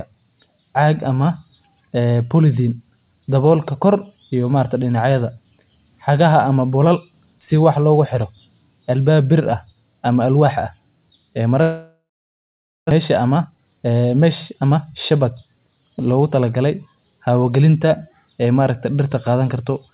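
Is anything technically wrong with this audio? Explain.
Yes, there are two faults in this speech clip, which came over a G.711 A-law call path with nothing above 4 kHz.

From 11.62 to 12.93 s there is a long network dropout, likely caused by packets never arriving. About a second of audio is lost. The last sound is stretched into a fading buzz or hiss, then about 0.8 s of silence follows, shown as a flat waveform and a blank spectrogram band.

From 13.21 to 14.85 s a jitter buffer speed-up removes about 0.3 s in tiny pitch-period cuts. The speech runs about 15% faster at unchanged pitch and sounds hurried, with compressed syllable spacing on the spectrogram.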